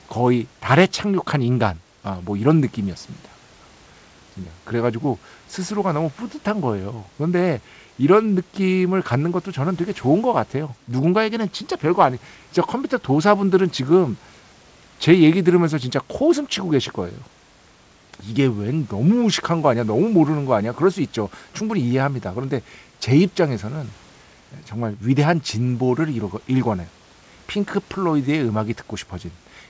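Nothing's actually wrong in this speech recording; it's just come over a call path that leaves nothing above 8 kHz, which fits a wideband codec such as G.722, with some room noise sitting about 34 dB below the speech.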